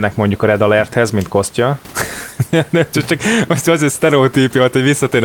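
Speech recording; no technical faults can be heard.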